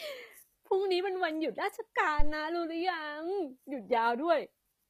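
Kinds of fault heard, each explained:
HE-AAC compression: The treble of this speech has a synthetic, gritty edge, and s sounds come out plainly metallic and lispy. The top end stops abruptly at about 14.9 kHz. Likely cause: HE-AAC coding at a low rate, fitting roughly 24 kbps. The codec encodes only the lower band and rebuilds the highs by copying lower bands upward under a coarse envelope, so the upper harmonics no longer line up with the real ones.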